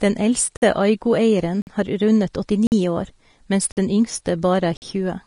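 Throughout the speech, the treble stops abruptly at 10.6 kHz and the upper band sounds hissy and grainy, with blurred consonant attacks. This is likely Vorbis compression: coarse quantisation above the spectral floor turns fine detail into noise, which fits a low bitrate near 34 kbps.

Gaps between chunks cut 50 ms silences into the sound at 0.57, 1.62, 2.67, 3.72 and 4.77 s. Each after the first follows exactly one second of audio, pointing to one-second chunks with silence inserted at every join. Nothing is lost, only interrupted.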